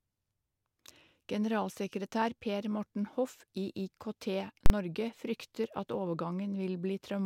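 At 4.66 s a single loud bang marks invalid numbers at full scale: a 40 ms block pinned at one extreme value, unlike a click, which lacks that sustained flat top.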